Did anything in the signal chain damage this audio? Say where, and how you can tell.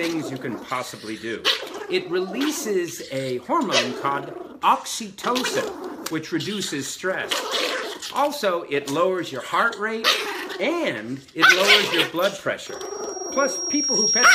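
Yes. A loudspeaker feedback squeal starts at 12.67 s and runs to the end. It is a single 5.6 kHz tone that swells over roughly a second and a half to about 10 dB above the sound. The microphone is picking up its own loudspeaker, and loop gain above one lets that frequency keep growing.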